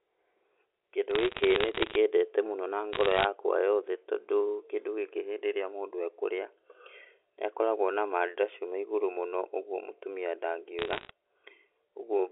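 Sharp ticks and a fine crackle sit over the speech from 1.11 to 1.96 s, ending just before "mũno na", then again from 2.93 to 3.25 s between "mũno na" and "yothe tondũ kĩndũ gĩkĩ", and from 10.79 to 11.11 s after "igũrũ mũno ũgwo mũtumia". These are bit errors on a digital phone line. Each flipped bit corrupts a single sample of the G.711 mu-law stream carrying the 300 to 3500 Hz telephone band, and the hits on sign or high-order bits give the loudest clicks.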